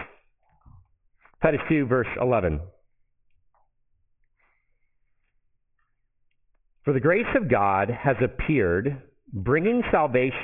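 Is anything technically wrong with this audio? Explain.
Yes, there's aliasing throughout. Content above 3 kHz folds back down as gritty, metallic, unrelated tones, fairly strong against the signal, which fits resampling to about 6 kHz without a low-pass filter first.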